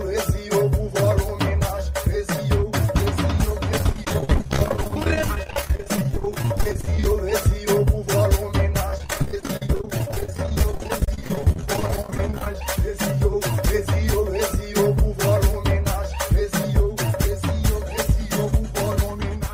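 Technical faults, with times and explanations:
3.78–7.06 s and 8.89–12.55 s, repeated packet loss (robotic sound): the sound keeps dropping out in short holes, up to about 30 ms in the first run and 46 ms in the second. Each hole gets patched by stretching the last bit of sound, so roughly a third of each stretch is filler. That's what gives it the choppy, robotic edge.
7.12–8.03 s and 12.60–13.41 s, jitter buffer speed-up: right after each loss run, the receiver has too much audio queued and trims it by cutting out tiny pitch-period slices, about 40 ms and then about 50 ms in total. The sound runs about 3% and then 6% fast at the same pitch, so the second one comes across hurried.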